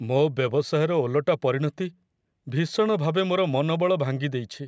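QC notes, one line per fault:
Nothing to log: no fault found in this speech clip.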